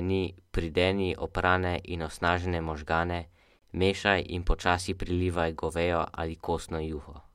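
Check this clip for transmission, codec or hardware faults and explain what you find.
There's one gap at a join of encoded pieces, at 3.59 to 3.62 s, between "oprane in osnažene možgane" and "mešaj in počasi prilivaj". Separately encoded chunks were stitched without trimming, leaving a 29 ms hole with smeared edges before the speech picks up where it stopped.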